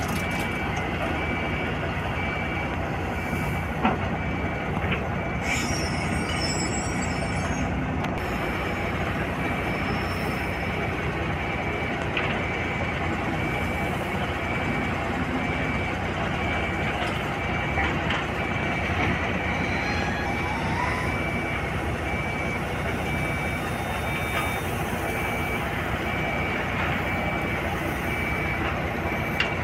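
From 22.62 to 24.75 s a feedback whistle sits thinly beneath the sound at 3.6 kHz, well below the main level and swelling and fading slowly. The likely cause is a loudspeaker-to-microphone loop poised at the edge of feedback. A spectrogram would show a narrow horizontal line.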